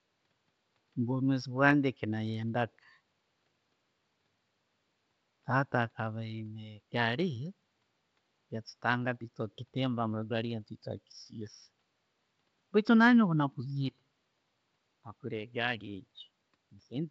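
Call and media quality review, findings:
Nothing stood out on listening through this speech clip; the low room noise sits well beneath the voice and the G.722 wideband coding carries the speech up to its 7 kHz ceiling with at most faint damage.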